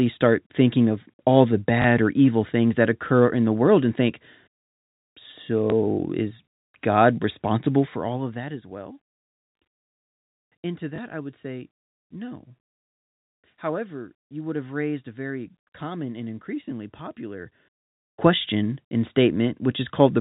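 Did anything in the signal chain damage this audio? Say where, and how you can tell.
Yes. At the network stage, packet loss with last packet repeated occurs at 1.82–1.84 s, 5.70–5.72 s and 10.96–10.98 s. Each time one 20 ms packet went missing and the receiver replayed the previous one. The repeat isn't aligned to the speech pitch period, and each single repeat is heard as a small blip.

In the gain stage, at the buffer or call-processing level, zipper noise runs from 7.74 to 8.47 s. The level drops by about 15 dB in coarse steps, roughly fifty a second, which points to gain being updated once per buffer with no interpolation. Each jump puts a small click into the waveform, so the fade ticks audibly under the speech. The G.711 mu-law telephone coding at 64 kbps shows only its usual 4 kHz band limit.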